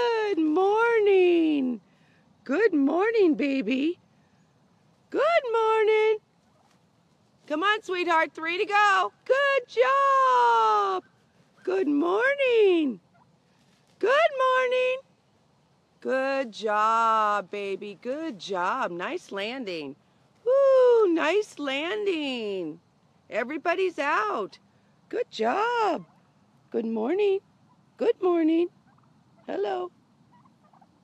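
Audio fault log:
No faults detected in this recording.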